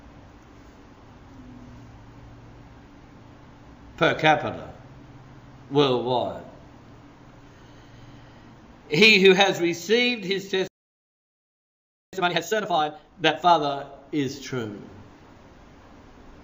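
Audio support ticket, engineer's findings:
Dead silence mid-flow, 10.68 to 12.13 s, about 1.45 s; playback stall, likely the player starving for data or its output thread blocking until recovery. Hurried sound at unchanged pitch, 12.13 to 13.57 s; time-compressed catch-up, the player running at twice normal speed by dropping and cross-fading short segments to drain its backlog.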